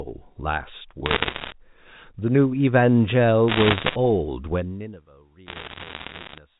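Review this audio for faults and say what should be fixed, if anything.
Bit errors on a digital phone line at 1.06–1.52 s, 3.48–3.96 s and 5.46–6.38 s: flipped bits in the A-law samples produce sharp ticks and crackle over the speech. To prevent this, carry the G.711 stream over an error-checked link or add error correction so corrupted bits never reach the decoder.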